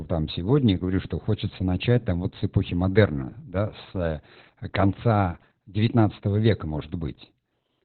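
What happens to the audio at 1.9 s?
At 1.9 s, as throughout, the speech passes through Opus voice compression in its SILK mode, squeezed to narrowband at a rate that sounds like about 8 kbps. Nothing survives above 4.4 kHz, and the coarsely coded excitation leaves the voice muffled, hoarse and faintly robotic.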